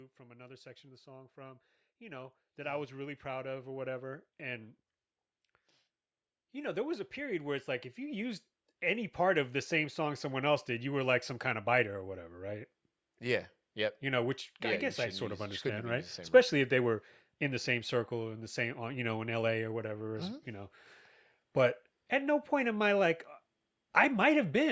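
Speech recorded through a call's microphone processing, with nothing above 8 kHz, shows automatic gain rising twice: from 0.17 to 4.78 s the level climbs by about 9 dB, and from 6.38 to 10.52 s by about 8 dB, ending just before "did you were like". The gain control judged the input too quiet and stepped its gain up slowly, so voice and background swell together. The waveform envelope widens steadily, and the spectrogram brightens evenly across all bands.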